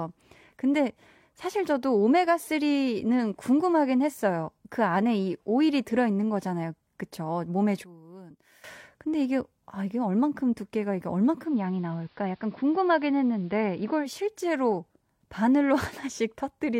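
From 7.84 to 8.64 s the speech drops about 18 dB, likely one channel inverted, cancelling the centred speech when summed to mono. From 11.32 to 14.21 s, digital radio blending to analogue AM: a 247 ms cross-fade brings in hiss roughly 35 dB down and a level dip of about 1 dB.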